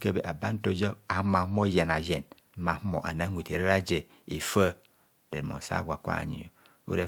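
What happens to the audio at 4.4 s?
Nothing goes wrong at 4.4 s; the speech carries on intact through that moment, with no dropout, click, distortion or other fault to be heard.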